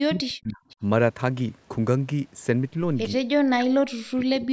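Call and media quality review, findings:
Speech suppressed in double talk: 0.00–0.64 s and 3.43 s to end; speech dips by up to about 40 dB and breaks up. Likely echo canceller ducking the near talker while the far side also speaks.

Echo leak: 0.70–0.76 s; faint delayed copy of the speech, around 30 dB below it, 301 ms late. Likely residual loudspeaker pickup passing the far-end echo canceller.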